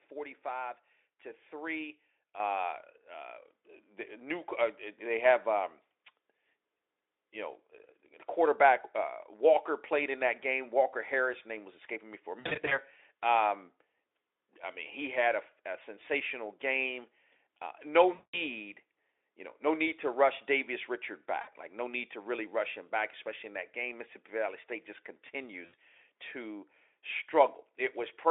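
Microphone volume stepped up at 2.4 s in this speech recording: the call software raised the input gain in one step, so voice and background jump about 8 dB together. VoIP packet loss concealed by the speech codec at 12.39–12.80 s (just after "escaping me for a"), 18.13–18.41 s, 21.41–21.50 s and 25.65–25.74 s: the Speex decoder fills missing audio by extending its last pitch and filter at falling gain, giving a buzzy tone or coloured noise that fades. The first dropout is broken into short gaps, the longest about 60 ms.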